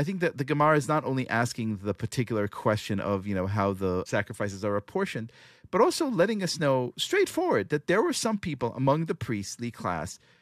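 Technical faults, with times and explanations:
Listening to this speech recording, nothing stood out as a technical problem.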